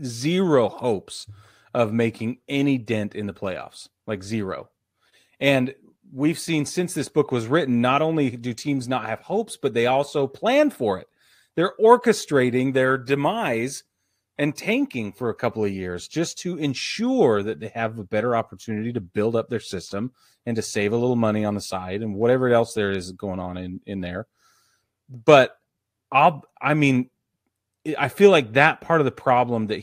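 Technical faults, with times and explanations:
No technical faults can be heard in this speech clip.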